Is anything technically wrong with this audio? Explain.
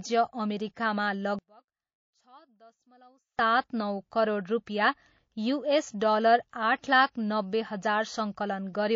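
Yes, there are three faults. Throughout, the speech has been coded with too few bits, likely from MP3 compression at a low bitrate around 32 kbps; treble is cut and weak detail flickers, giving a plainly audible watery, swirly sound.

From 1.39 to 3.39 s, one channel likely inverted in polarity cancels the shared centre when summed to mono, dropping the speech by about 32 dB to a faint residue.

At 6.50 and 7.12 s, pre-echo appears: with long 72 ms transform windows and no switch to short blocks, quantisation noise spreads about 30 ms ahead of each attack, adding a hiss about 12 dB up and softening the onset.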